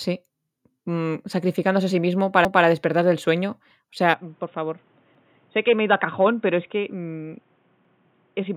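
At 2.45 s the speech stutters: a 200 ms stretch from 2.45 to 2.65 s plays twice, the mark of overlapping chunks. The stream is assembled from 2.5 s blocks that each begin 200 ms before the previous one ended, so the join repeats material instead of losing it. That repetition is what separates it from a dropout or skip, where sound goes missing. It returns at 5.15 s, repeating 5.15 to 5.35 s, 2.7 s later, and that regular spacing points to block processing rather than a random glitch.

From 4.14 s to the end, the speech abruptly turns dull and boxy. It also becomes about 10 dB quieter and sits over a new noise floor roughly 35 dB below it. There is no gap at the change. The likely cause is an input switched to a poorer device, such as a headset's call profile. A codec narrowing the band would not also shift the level and bring in its own background noise at one instant.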